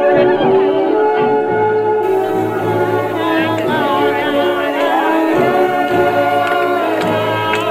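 Pre-emphasis left on from 2.03 s to the end at 7.70 s: the treble boost, matching a 75 µs FM curve, was never undone, leaving about 14 dB extra at 10 kHz, so the sound turns thin, bright and sibilant.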